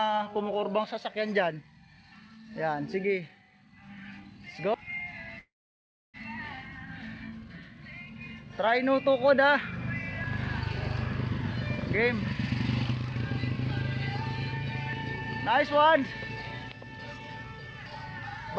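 At 4.74 s the audio jumps abruptly, as if a short stretch were cut out and the two sides butted together. This is audio missing between chunks, likely from a recorder working in 5-second blocks and dropping roughly a third of a second at each handover.

From 5.39 to 6.17 s the sound hangs on a fading buzz, then falls silent for about 0.64 s before resuming exactly where it stopped. This is a call audio freeze, likely caused by delayed packets draining the jitter buffer, so about 0.75 s of filler was inserted with nothing lost.

The same chunk skip returns at 10.24 s.

Between 12.93 and 13.72 s the audio runs slightly faster while the pitch stays the same. This is a jitter buffer speed-up: the receiver trimmed about 40 ms of pitch periods to shrink its backlog, playing at 104% speed.

Another chunk skip follows at 14.93 s.

A stronger speed-up runs from 16.76 to 17.82 s at 111%, removing about 150 ms. 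Throughout, the G.722 call path leaves nothing above 8 kHz.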